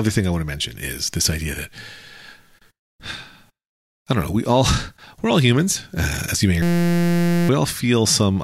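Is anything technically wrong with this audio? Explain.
Yes. From 6.62 to 7.49 s, just after "as you may or", a system hang loop repeats one 5.8 ms buffer, likely 256 samples, producing a steady 172 Hz buzz and losing about a second of speech.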